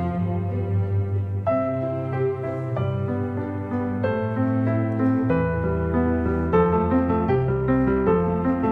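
From 6.44 s to the end of the audio at 8.71 s there is a time-stretched section: the pace jumps abruptly to about 1.67 times normal speed while the pitch holds, giving a rushed sound, likely from software dropping short pieces to shorten that part.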